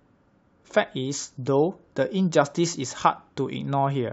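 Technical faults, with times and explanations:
Nothing technical stands out here; the speech comes across without any audible glitches or problems along the way.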